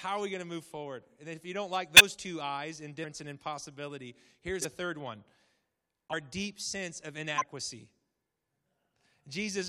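Compressed frames are skipped five times: at 1.96–2.01 s between "if you don't like" and "two eyes", at 3.03 s, at 4.61–4.65 s between "and impossibility" and "third one", at 6.12–6.14 s just before "deep sense of", and at 7.33–7.44 s. Each time, whole frames never reach the output, so the speech jumps forward by roughly 50 to 150 ms. Unlike a dropout, there is no silent gap.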